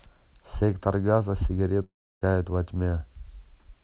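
Speech, band-limited to nothing above 4 kHz as a G.711 A-law call at 64 kbps would be, breaks off at 1.84 s. Until 2.23 s, the last sound is stretched into a buzzy continuation that quickly fades, leaving mostly silence. Speech then resumes with about 380 ms missing. This is a long network dropout: audio packets likely stopped arriving, and the receiver's concealment could only smear out the final fragment before giving up.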